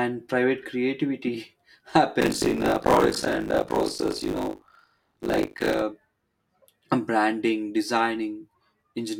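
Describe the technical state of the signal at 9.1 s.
Nothing is wrong with the signal at 9.1 s; the audio is intact at that moment.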